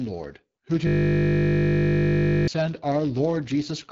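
Throughout the speech, a block size mismatch (padded) leaves a zero-filled gap in every block, producing a 91.5 Hz buzz and slowing playback very slightly, by about 0.4 percent. The AMR wideband (HD Voice) codec adds plainly rough, raspy coding damage, which fits one of its lowest rates, near 8.85 kbit/s, with nothing above 7.5 kHz. From 0.87 to 2.48 s, a system hang loop repeats one 20 ms buffer while the hardware keeps cycling it, giving a steady 50 Hz buzz in place of the speech.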